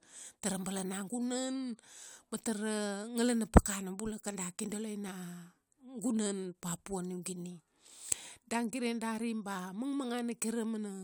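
At 6.17 s a single sharp click cuts through the speech, brief enough that nothing seems to go missing, and it shows as a thin vertical line across the whole spectrum. This is likely dropped samples: a fraction of a millisecond of the stream vanishes, so the waveform leaps straight from one value to a later one instead of moving smoothly between them. That sudden step is what the ear picks up as the click.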